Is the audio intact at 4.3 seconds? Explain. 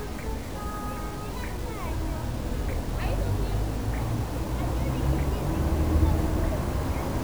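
No. At 4.3 seconds, as throughout the clip, the sound is grainy and gritty, with a harsh distortion that shifts with the signal and quiet passages sputtering or dropping out. This is likely low bit depth without dither: samples truncated to about 6 bits, leaving error only around 20 dB below the signal.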